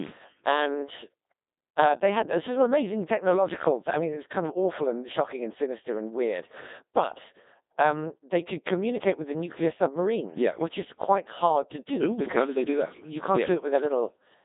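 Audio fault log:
Throughout, Codec 2 vocoder: the speech is resynthesised from pitch, voicing and spectral envelope, not the original waveform, so it sounds heavily robotic and buzzy, consistent with roughly 2.4 kbit/s. A spectrogram shows tidy synthetic harmonics between 200 Hz and 3.7 kHz, blank above 3.8 kHz.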